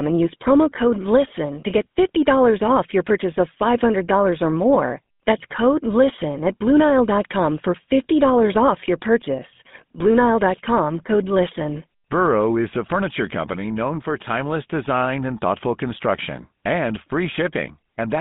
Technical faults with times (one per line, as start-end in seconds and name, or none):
0.00-18.21 GSM full-rate codec